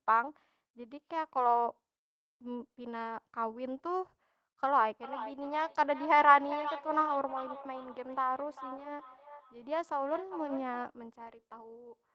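Speech with a feedback echo between two devices from 4.69 s to 10.92 s. Each phrase comes back roughly every 0.4 s as a thinner, ringing copy, up to about 12 dB below the voice, because a nearby device replays the call into a live microphone. A spectrogram shows regularly spaced, fainter duplicates trailing each syllable.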